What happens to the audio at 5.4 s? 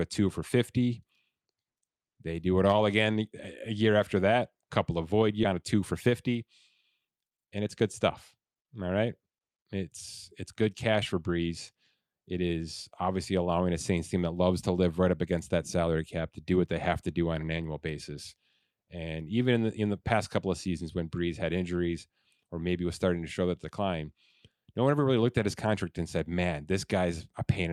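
A skip ahead happens at 5.43 to 5.45 s. About 0.7 s of speech was dropped. Playback jumps forward, joining both sides with no gap.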